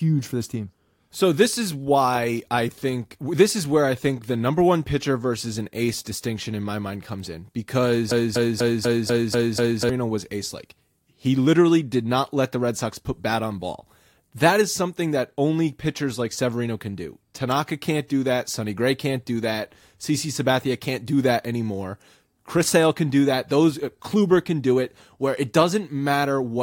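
From 8.11 s to 9.89 s the speech falls into a broken-record loop: a fragment of about 245 ms repeats exactly, back to back, seven times, giving a rapid mechanical stutter before normal playback resumes on "was ace like". The likely cause is a stall in the player, encoder or stream, which kept resending the last buffered piece. Whatever speech should have occupied those 1.8 seconds is missing rather than delayed.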